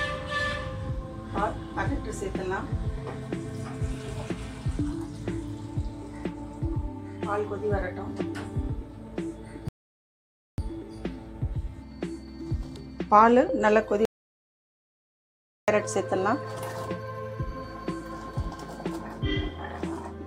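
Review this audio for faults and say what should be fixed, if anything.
A rebuffering stall runs from 9.69 to 10.58 s. The player ran out of downloaded audio and paused for about 0.9 s, then picked up exactly where it stopped. Unlike a dropout, nothing is lost; time is added. A larger playback buffer would prevent it.

An audio dropout to silence runs from 14.05 to 15.68 s. The sound cuts out mid-flow, leaving about 1.63 s of silence with no room tone. Unlike the stall, the sound resumes further on, so material is missing. The likely cause is a lost input. Securing connections and monitoring the input level while recording would prevent it.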